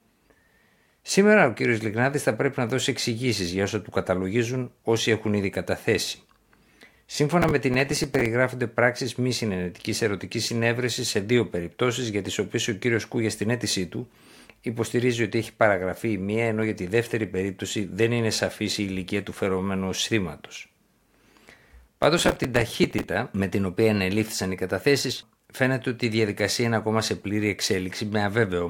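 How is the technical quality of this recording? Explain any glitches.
The recording has two bursts of processor overload crackle. A gritty tearing rides on the speech from 7.42 to 8.26 s, before "πράξει μη συνενετική ερωτική", and from 21.88 to 23.09 s, before "με την οποία ενελήφθησαν". The processor kept missing deadlines for tiny buffers, around 5 ms each, and replayed stale audio with hard edges about 20 times in the first burst and about 40 times in the second.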